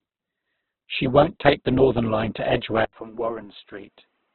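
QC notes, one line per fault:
Throughout: Opus compression, likely at a very low bitrate around 8 kbps. Nothing survives above 4.4 kHz, and the speech sounds heavily grainy and rough because the music-style mode fills starved bands with noise or folded copies instead of leaving gaps.
2.85 to 4.34 s: input switched to a poorer device, likely a change of mic or headset profile. An 80 ms silence marks the switch, then the top narrows to 3.8 kHz, the level drops a little, and a faint new background noise appears.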